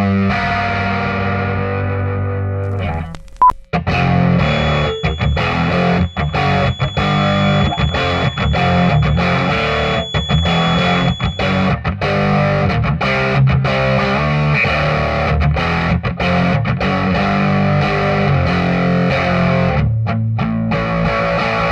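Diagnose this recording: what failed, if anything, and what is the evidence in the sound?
Feedback whistle from 4.34 to 11.78 s: a steady tone near 3.4 kHz sits roughly 15 dB below the sound, swelling and fading in level. The likely cause is a loudspeaker-to-microphone loop at the playback stage, held just short of building into a howl.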